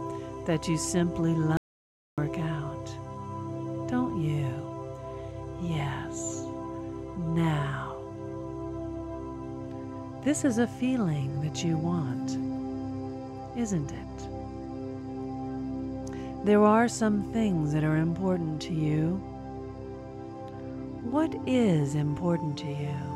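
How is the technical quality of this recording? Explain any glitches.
There's one glitch: an audio dropout to silence from 1.57 to 2.18 s. The input likely got lost briefly, so about 0.6 s became silence, with no room tone, before the sound snaps back.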